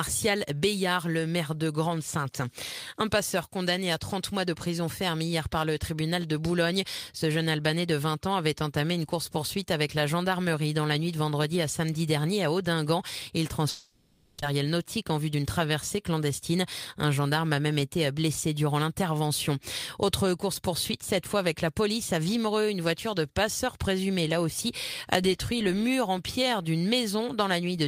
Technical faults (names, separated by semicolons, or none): long network dropout; jitter buffer speed-up